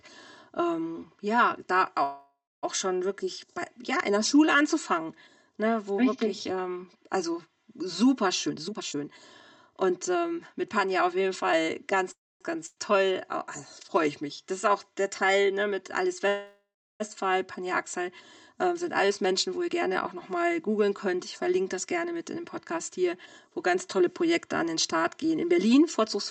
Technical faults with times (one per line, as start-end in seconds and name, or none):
0.00-26.31 channel delay (comb filtering)
2.03-2.65 call audio freeze
8.47-11.53 jitter buffer speed-up
12.12-12.43 call audio freeze
12.66-12.78 burst of packet loss
16.28-17.02 call audio freeze
18.67-26.02 jitter buffer speed-up